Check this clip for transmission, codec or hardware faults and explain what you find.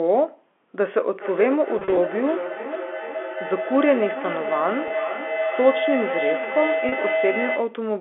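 Two faults are audible: a sustained feedback howl and three short packet losses bridged by pitch repetition. The G.711 telephone coding on the line is working as expected, with the sound held to about 250 Hz to 3.4 kHz.

Feedback howl, 1.18 to 7.85 s. Two devices on the same call share a room. Sound from one loudspeaker re-enters the other microphone and returns louder each trip, so the loop reinforces its favoured frequency instead of dying away. It settles into a tone around 700 Hz that pulses roughly every 0.4 s and peaks at about 5 dB below the speech. It persists almost to the end.

Packet loss with pitch repetition, at 1.79 to 1.97 s, 4.88 to 4.90 s and 6.89 to 6.92 s. When audio packets go missing, the receiver fills each gap by repeating the last pitch period. In the first event, about 90 ms is lost in pieces spread over 180 ms, with no single run longer than 40 ms, so it sounds like slightly held, buzzy notes. 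The later gaps of 20 ms and 30 ms are brief, slightly held buzzy moments.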